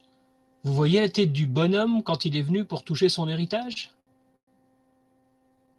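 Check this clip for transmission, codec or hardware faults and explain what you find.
There are two bursts of repeated stalls (stutter) near the end, carried over a call path whose top end stops around 12 kHz, which fits Opus at a modest bitrate.

From 3.63 to 4.49 s, just after "venu pour toucher son", the speech drags and hiccups. About a quarter-second in total is stretched, with one hold of about 115 ms. From 4.91 to 5.77 s there are many shorter catches of up to 23 ms each. In both places, late packets kept emptying the jitter buffer, and the receiver extended the last sound to fill each wait. Nothing is lost, but the rhythm stumbles.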